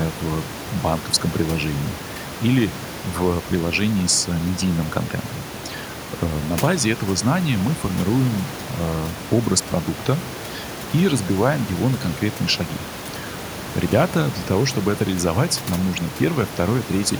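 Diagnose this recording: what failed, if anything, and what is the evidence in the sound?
The culprit is overdone noise removal in the call-processing stage, and it runs for the whole clip. Between phrases the room noise, only about 14 dB under the speech to begin with, gets pushed down with little twinkling specks left behind. The suppressor clamps individual frequency bands whenever they drift near its noise estimate, and the quieter parts of the voice go down with them.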